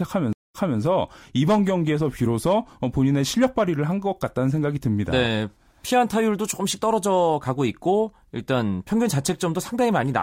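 A stream reconnect breaks this speech clip at 0.33 s: after about 184 ms of silence, the audio resumes 287 ms earlier, repeating a stretch, as a restarted decoder fades back in.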